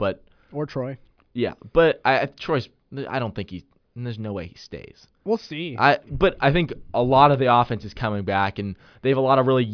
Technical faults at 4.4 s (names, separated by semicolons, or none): none